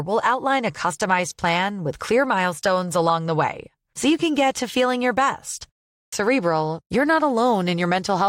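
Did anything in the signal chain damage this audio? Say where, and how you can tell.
Yes: a clipped start after a pause at playback, around 5.96 s after "to feeling your best"; the waking output device drops about 164 ms, so the waveform begins abruptly from flat silence.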